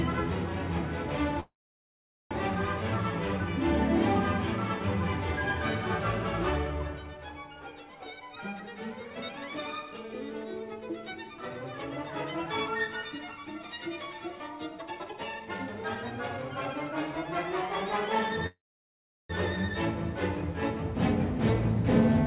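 From 1.4 to 2.33 s there is a call audio freeze, likely from delayed packets draining the jitter buffer. The last sound continues as a brief fading buzz or hiss, then about 0.8 s of silence. Unlike a dropout, the audio resumes exactly where it stopped, adding a gap without losing anything.

Jitter buffer speed-up follows as the receiver trims a backlog by cutting short pitch-period slices. From 8.60 to 12.05 s the sound runs at 106% speed, removing roughly a fifth of a second. From 12.87 to 13.66 s it runs at 112%, removing about a tenth of a second. From 14.79 to 16.74 s it runs at 130%, removing around 0.7 s and sounding clearly hurried. Unlike a pitch shift, the pitch stays the same.

A second call audio freeze runs from 18.46 to 19.31 s, again likely from late packets. A short fading tail gives way to about 0.74 s of silence, and the audio then picks up unbroken. Throughout, the band stops at 4 kHz, which points to a narrowband telephone codec.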